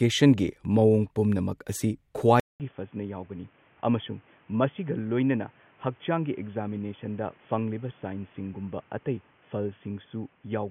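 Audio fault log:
2.40–10.70 s, input switched to a poorer device: after "ꯃꯑꯣꯡ ꯄꯨꯝꯅꯃꯛ ꯑꯁꯤ" there's a 200 ms gap, then the speech drops about 10 dB, loses everything above 3.4 kHz and picks up new background noise, likely a headset call profile taking over.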